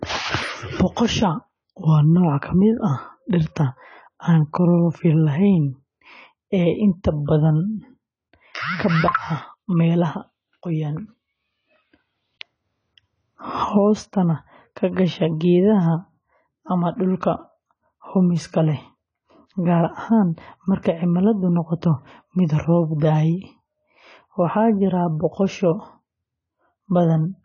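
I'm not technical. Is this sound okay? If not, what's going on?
No. Heavy AAC compression likely squeezed this speech, so from start to finish it sounds dull and smeared, with nothing above 10 kHz and a fizzy edge.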